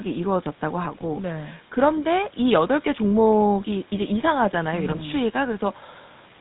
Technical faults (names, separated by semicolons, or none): GSM full-rate codec; GSM bit errors